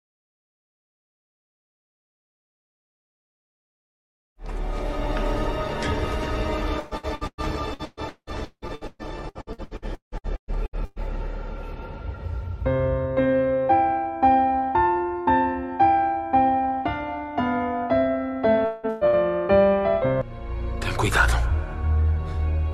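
From 6.79 to 10.99 s the sound turns choppy and robotic, with about two dozen short holes patched by smeared continuations. This is repeated packet loss (robotic sound). Nearly half that stretch is concealed, roughly 1.9 s is lost in all, and the longest single gap is 177 ms.

At 18.65 s the audio freezes into a held buzz and hiss that fades over about 0.21 s and never falls fully silent. The likely cause is a long network dropout that discards about 180 ms, with the receiver stretching the last sound across the hole.

Two more smeared, fading holes follow almost at once, at 18.89 to 19.04 s and 19.07 to 19.16 s. Each is a burst of packet loss, losing about 120 ms and then 60 ms. Each time the last sound is drawn out and turned down until the audio resumes further on.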